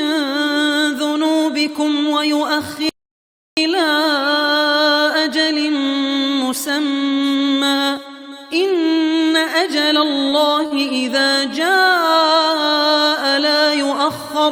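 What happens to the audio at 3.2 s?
At 3.2 s you're in the middle of an audio dropout to silence, from 2.89 to 3.57 s: about 0.68 s of dead silence, no room tone, likely a lost input link.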